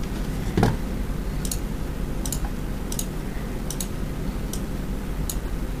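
Nothing here stands out as a technical problem; the sound carries on steadily with no glitches, gaps or odd artefacts to point to.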